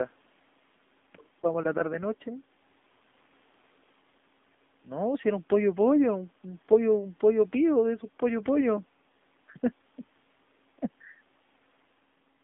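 Throughout, the speech sounds buzzy and synthetic, confined to roughly 200 Hz to 3.6 kHz, with faint room noise about 41 dB down. This is the AMR narrowband mobile codec: pulse-driven vocal-tract modelling whose plainly audible damage fits a low 7.4 kbps mode.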